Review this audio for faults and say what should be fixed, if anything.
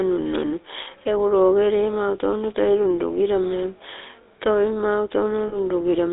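The GSM full-rate codec runs through the whole speech clip. Its pulse-driven vocal-tract model, which fits a 13 kbps stream, leaves a plainly audible buzzy, gravelly roughness within a 300 Hz to 3.7 kHz line band. Use a wideband codec to prevent it.

Lost GSM frames occur from 5.48 to 5.56 s, right after "toi mau". The decoder repeats the last good frame's settings, so the sound holds as a rough metallic ring for 40 ms, which fits two missing frames. Reduce channel errors or add stronger error protection to prevent this.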